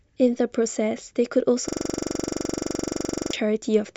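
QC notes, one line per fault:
1.68–3.33 s, system hang loop: the speech stops progressing and a single 42.67 ms slice repeats exactly, about 39 times, because the system froze while the audio hardware kept replaying its ring buffer, which fits a 2048-sample buffer. At 23.4 Hz it sounds like a rapid machine-gun stutter. Unlike packet-loss concealment, the repeats don't fade or vary: they are identical, evenly spaced and sustained for over a second.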